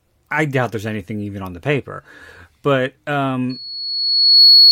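At 3.49 s a loudspeaker feedback squeal sets in and runs to the end of the clip at 4.71 s. The microphone is hearing the loudspeaker it feeds, and at 4.4 kHz the loop gain exceeds one, so that frequency feeds itself. A single piercing tone swells over about a second until it sits roughly 15 dB above the speech. Unlike a steady hum or interference whistle, it starts from nothing and keeps climbing at one fixed pitch.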